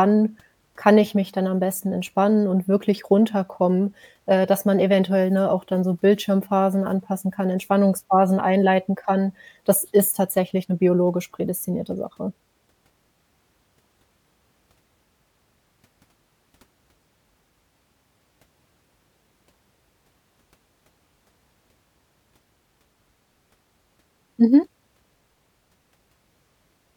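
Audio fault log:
No faults are audible anywhere in the recording.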